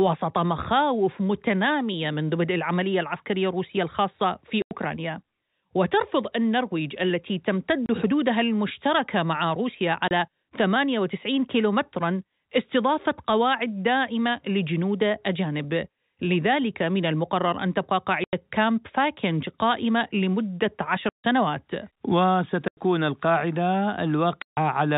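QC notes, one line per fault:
4.62, 7.86, 10.08, 18.24, 21.09, 22.68 and 24.42 s: packet loss filled with silence. The telephone-band speech cuts to dead silence for 90, 30, 30, 90, 150, 90 and 150 ms, with hard edges. Every gap is a multiple of 30 ms, which fits whole 30 ms packets going missing.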